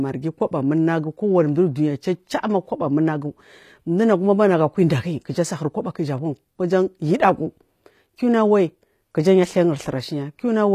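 Speech, with plainly audible codec damage throughout, most likely from HE-AAC compression at a low bitrate, which fits something around 24 kbps. Nothing is present above 14.9 kHz, and the treble below that limit sounds synthesised rather than captured: upper bands have been regenerated from lower ones by spectral band replication under a coarse envelope. The harmonics no longer line up across the crossover, so s sounds come out gritty and metallic, with a lispy edge.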